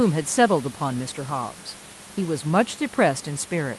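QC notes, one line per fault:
No faults found; the speech carries the call codec's normal band limit at about 12 kHz, with room noise sitting about 24 dB below it.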